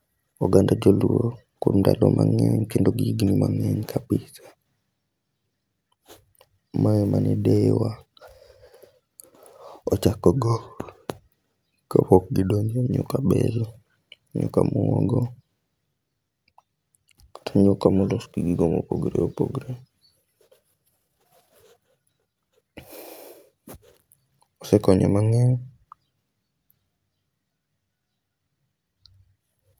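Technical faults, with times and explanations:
No technical faults can be heard anywhere in the speech. There is nothing to list by time.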